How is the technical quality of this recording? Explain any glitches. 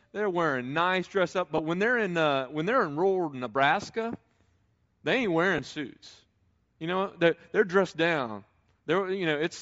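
Technical quality is compromised by coded transmission across the whole speech clip, plus two short dropouts.

Bluetooth LC3 compression runs throughout, and it is plainly audible. The speech carries a breathy, grainy edge on its upper frequencies, the texture of a transform codec that discards much of the high spectrum and patches it with shaped noise. That points to LC3 running at a low rate, which fits roughly 32 kbps with 10 ms frames, as the likely cause.

Lost LE Audio frames occur twice: from 1.58 to 1.60 s, between "wearing nice dress up" and "when they're in uh", and at 5.58 s, just after "they ain't". Each gap fits a single 10 ms frame going missing. The decoder conceals it by repeating the previous spectrum with scrambled phase signs, so instead of a clean gap you hear a brief noisy smear where the voiced sound loses its tonal clarity.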